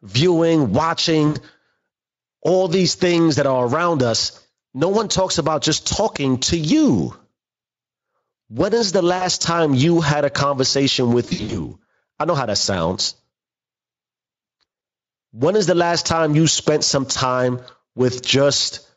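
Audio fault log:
1.27–1.38 s, 9.17–9.26 s (after "is the", before "time you had a"), 11.25–11.71 s (after "you had a conversation", before "I know how that"), 14.61–14.64 s: VoIP packet loss concealed by the speech codec. The sound smears into a buzzy tone or a coloured noise that fades because the Speex decoder extrapolated its last pitch and filter across lost packets.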